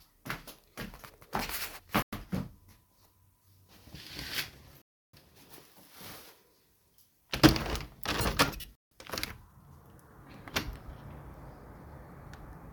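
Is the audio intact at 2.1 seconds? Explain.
No. From 2.02 to 2.13 s the sound drops to silence for about 103 ms, then resumes where it stopped. This is likely a Bluetooth stall: interference delayed packets, the headphones' buffer emptied, and playback paused until retransmitted data arrived.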